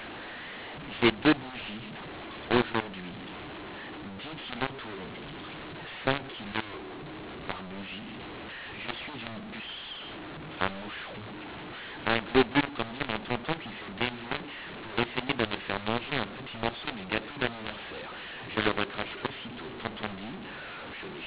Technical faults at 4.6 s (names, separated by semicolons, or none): mu-law and A-law mixed up